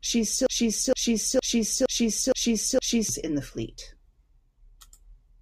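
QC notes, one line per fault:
0.46–3.09 s: broken-record loop; a 0.46 s fragment repeats six times before "in the fleet", likely a stalled stream resending its last buffer, losing the real audio.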